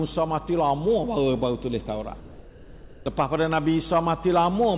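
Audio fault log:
2.2–3.06 s, comfort noise in place of the background: for 860 ms the real background, sitting about 20 dB below the loudest passages, gives way to a steady, featureless hiss about 3 dB quieter, then returns when the sound resumes. This likely comes from discontinuous transmission: the sender stopped coding during the pause, and the receiver synthesised shaped noise to fill it. Band-limiting to 4 kHz, consistent with a 64 kbps G.711 mu-law call path, applies across the clip.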